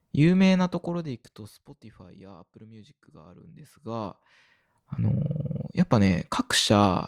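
A speech clip with zipper noise in two places: a fade down of roughly 25 dB from 0.56 to 1.72 s and a rise of similar size from 3.34 to 4.81 s. Unlike a smooth fader move, each change advances in small steps, about 1 dB in the first and under 1 dB in the second, around forty a second, so a ticking buzz rides on the speech.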